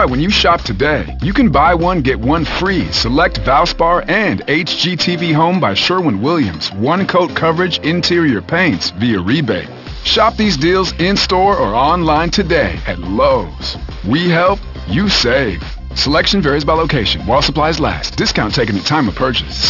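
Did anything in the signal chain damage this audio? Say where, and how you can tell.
Yes. The damage happened at sample-rate conversion: the audio was brought down to a much lower rate with no anti-aliasing filter in front of it. This is aliasing, and it runs through the whole clip. Everything above 6 kHz folds back below that edge, which fits a drop from 48 kHz to 12 kHz. The folded energy lands at unrelated frequencies, fairly strong at roughly 10 dB under the wanted signal. That makes bright content sound gritty and metallic, and the spectrum stays dense right up to 6 kHz before stopping abruptly.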